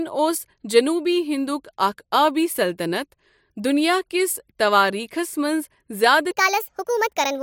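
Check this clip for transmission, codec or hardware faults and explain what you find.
One fault is present. Section at the wrong speed, 6.31 s to 7.42 s: the closing speech runs 1.44 times fast, likely from a mismatched playback clock, so it jumps about seven semitones higher and sounds hurried.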